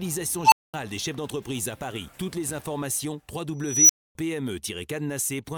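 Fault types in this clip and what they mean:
Unstable filter: A recursive filter ran away twice. A tone of around 1 kHz swells over 78 ms from 0.44 s. A higher tone near 5 kHz builds over 264 ms from 3.63 s. Each grows very loud, clips, then drops to silence for 220 and 260 ms.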